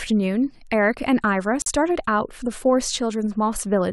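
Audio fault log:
1.62–1.68 s, Bluetooth dropout: packets likely arrived too late and were dropped, cutting a 56 ms silent hole in the speech before it resumes further along.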